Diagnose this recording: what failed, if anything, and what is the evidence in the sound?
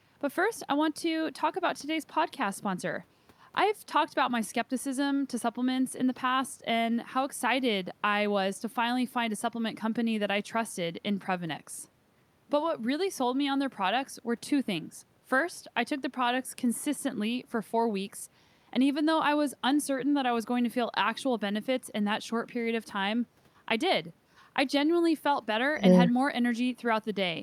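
Nothing in this speech recording points to a failure anywhere in the chain. There is no audible evidence of a problem at any stage, so there is no mechanism to diagnose.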